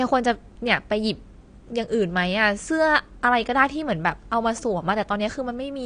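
AAC compression runs through the whole speech clip: nothing is present above 9.6 kHz, and the damage is plainly audible as a dull, smeared texture. That is likely low-bitrate AAC-LC coarsely quantising each frame's spectrum, which fits roughly 32 kbps.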